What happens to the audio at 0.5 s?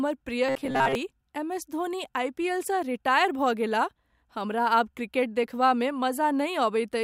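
From 0.47 to 0.95 s the speech has robotic sound from repeated short buffers: a rigid metallic buzz near 133 Hz, likely from about 7.5 ms chunks repeated over most of the span.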